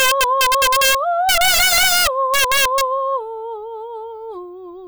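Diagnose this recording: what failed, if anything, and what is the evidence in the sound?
Integer overflow in the sample-format conversion or gain stage: the music was driven about 9 dB past the integer ceiling, and instead of being limited, every sample beyond full scale wrapped around to the opposite extreme. Throughout the clip, each loud peak turns into a violent crack, far harsher than ordinary clipping, because the waveform jumps across the entire range rather than flattening. Around 7 percent of the samples land past the limit, so the cracks recur on every strong passage.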